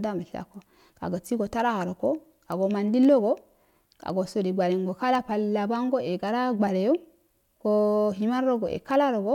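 A speech recording with word clock ticks running through most of it, from about 0.42 s to 8.84 s. They arrive at a steady pace of roughly one every half second, around fifteen in all, sharp and uneven in strength. That's the sound of a digital input being read on a free-running clock that isn't locked to the source. The two clocks disagree by something like 40 ppm, so every time they drift past each other a single sample gets dropped or doubled and you hear a tick.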